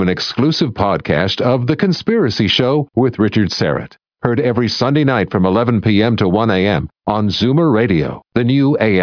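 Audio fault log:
No technical faults are audible anywhere in the speech.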